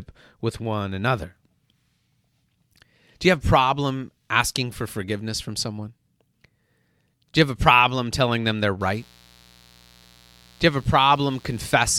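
From 8.81 s to the end of the speech, a mains buzz comes in, sitting roughly 30 dB below the talker. Sharp switching spikes leak into the signal twice per 60 Hz cycle, so the buzz is built from 60 Hz harmonics stretching into the kilohertz range. That upper content gives it a raspy, edgy texture, which separates it from a smooth, low hum concentrated near 60 Hz itself.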